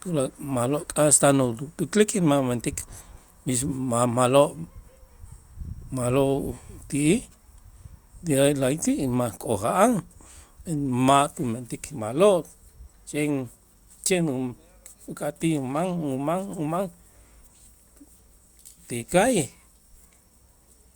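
No technical faults are audible anywhere in the speech recording.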